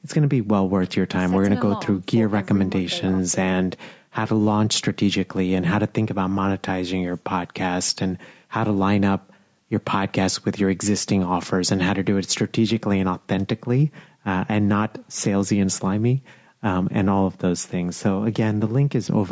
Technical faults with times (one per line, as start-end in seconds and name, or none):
none